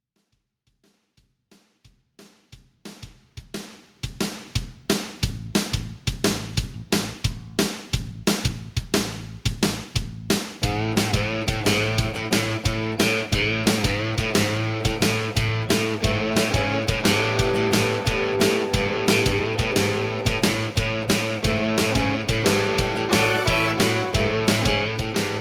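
Nothing here stands out as a technical problem; the audio runs along without any glitch, dropout or distortion catching the ear.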